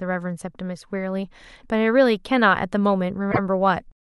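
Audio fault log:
3.31–3.39 s, repeated frames: the speech hiccups briefly, a tiny stutter where a sliver of sound is heard twice in a row. One compressed block of 26.1 ms was played once more than it should have been, so the decoder reproduced the same fraction of a second again before carrying on. The block length fits a 1152-sample MP3 frame at 44.1 kHz. The repeat adds 26.1 ms to the clip's running time.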